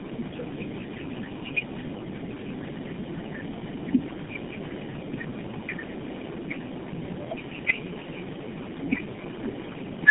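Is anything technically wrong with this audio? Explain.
Yes, there's tandem speech coding running the whole way through. The speech sounds like it was decoded and squeezed again by about three low-rate speech codecs in a row, each working on the last one's damage, so it comes out rough, muffled and warbly, with nothing above 3.8 kHz.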